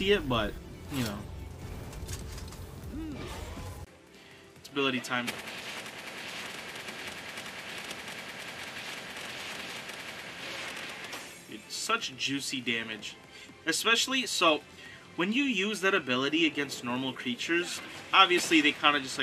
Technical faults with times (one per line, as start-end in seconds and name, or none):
3.85-19.22 input switched to a poorer device